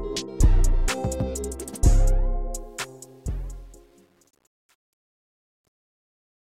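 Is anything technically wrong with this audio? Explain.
Yes. From 2.59 s to 6.47 s, the fade-out shows truncation distortion: the fade stage drops low bits without dither, fitting about 9 bits, so from 3.41 s the tail turns gritty.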